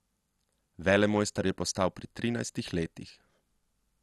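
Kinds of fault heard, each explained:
MP2 compression: the speech sounds dull, with nothing above 12.1 kHz, plus a gurgling, granular roughness as coarse sub-bands flicker on and off. Unlike a plain low-pass filter, the texture itself is damaged, which fits a low-rate MPEG Layer II encode, likely around 64 kbps.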